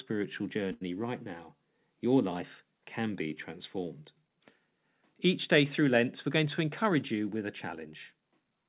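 At 0.72 s a sound is held too long, for about 0.11 s until 0.83 s, with a faint buzzy flattening before the speech resumes exactly where it left off. This is a short stall from a late packet: the next packet missed its slot, the jitter buffer ran dry, and the receiver stretched the last stretch of audio by 89 ms to cover the gap. Nothing is lost, but playback now runs 89 ms later than before.

From 6.36 s to 7.43 s the speech sounds slightly hurried while its pitch stays unchanged, running at 106% of normal speed. This is a jitter buffer speed-up: with more audio queued than the buffer wanted, the receiver trimmed many tiny pitch-period-sized slices in quick succession, removing around 70 ms in total to bring the delay back down. The whole clip is band-limited, with nothing above 4 kHz, consistent with a 64 kbps G.711 A-law call path.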